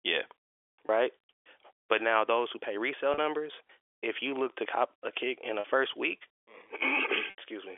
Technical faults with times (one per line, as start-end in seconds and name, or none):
0.87 packet loss with pitch repetition
3.14-3.18 packet loss with pitch repetition
5.60-5.64 packet loss with pitch repetition
7.30-7.38 packet loss with pitch repetition